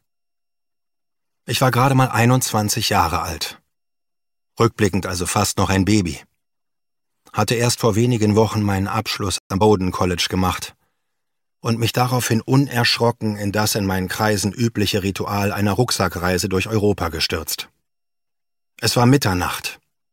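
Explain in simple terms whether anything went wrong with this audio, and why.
Two linked problems occur just before the middle of the clip. The first is a playback stall: at 9.38 s the sound cuts out abruptly and stays silent for 120 ms, until 9.50 s. The gap comes in mid-flow, not at a natural pause. This is likely caused by the player running short of incoming data, or by its processing being briefly held up, so there was nothing to send to the speakers until it recovered.

The second problem follows immediately. From 9.50 s to 9.62 s there is a time-compressed catch-up: the player plays the delayed audio at double speed to make up the lost time. To do this without raising the pitch, it drops small slices and blends the remaining pieces together. The result is a brief hurried stretch at normal pitch, before the audio returns to its regular pace.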